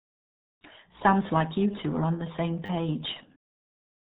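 From the very start the whole thing runs through the RealAudio 14.4 codec, and it's heavy going. Nothing gets through above about 3.8 kHz, so the speech sounds muffled and boxy, with that gargly, underwater smear on vowels and consonants. The damage is what you'd expect from a very low-rate coder built for dial-up, and the level of crushing fits something around 8 kbit/s, with very little detail left to work with.

Then at 2.66 s, right after "are on the same", there's a repeated buffer running to 2.69 s. The playback side didn't get fresh audio in time, so it looped the last chunk it had. Each pass is tiny, which fits a 10 ms buffer, so instead of a recognisable stutter you get a brief buzzy click lasting about 30 ms, with hard joins at every repeat. Nothing seems to go missing around it.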